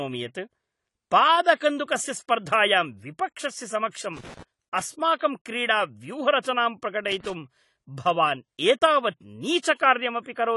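Speech runs throughout with plainly audible dull, smeared coding damage and nothing above 11.5 kHz, likely AAC-LC compression at about 32 kbps rather than a simple low-pass filter. Pre-echo, a short hiss leading each attack, appears at 1.55 s just before "स्पर्धायां विपक्षस्य", at 3.91 s just after those words, and at 6.42, 9.58 and 9.75 s. It spreads 23 to 57 ms ahead of each attack, unlike reverb, which trails after the sound. Loose connector crackle is an irregular burst of scratching from 4.17 to 4.43 s and from 7.11 to 7.30 s. It is irregular, unlike the steady clicks of digital dropouts.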